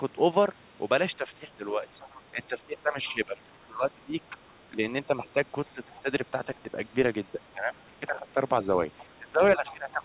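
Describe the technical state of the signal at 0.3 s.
At 0.3 s the signal is intact, with no fault present, only the narrowband character of the call path, which carries nothing above 4 kHz.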